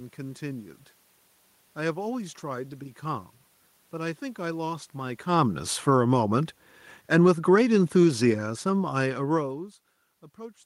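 Automatic gain falling runs from 5.24 to 9.72 s in this speech recording. The gain control judged the input too loud, or its background noise too strong, and pulled its level down by about 10 dB across those four and a half seconds, so the voice and the room noise beneath it sink together. This is distinct from the talker's own movement near the mic around 5 and 9 s. Automatic gain rising interrupts that descent from 6.06 to 6.5 s. The control briefly read the input as too quiet and lifted its gain by about 4 dB, making voice and background swell in step for under half a second before the downward drift resumes.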